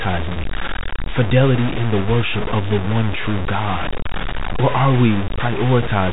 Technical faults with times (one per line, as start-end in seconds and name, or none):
0.00-6.12 low bit depth without dither
0.33-0.36 packet loss with pitch repetition